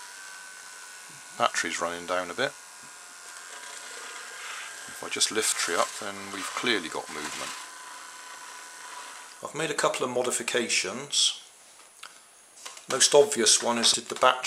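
The sound jumps forward twice, at 5.52 s and 13.94 s, where compressed frames were skipped. Roughly a third of a second of audio vanishes at the first jump and about half a second at the second, which fits around ten and fifteen lost frames of 32 ms each. The waveform shows an abrupt change in envelope with no gap, and the spectrogram shows a sudden shift in pattern.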